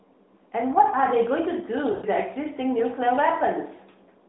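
Lost AMR speech frames at 1.92 to 2.08 s: radio errors corrupted a run of frames that failed their checksum, and the decoder filled the gap by repeating the last good pitch and vocal tract settings at falling gain. The speech stretches into a smeared, sustained tone and sinks toward silence, then returns weak or rough. The roughly 120 ms of missing audio fits about six 20 ms frames, heard against narrowband AMR-NB speech capped near 3.7 kHz.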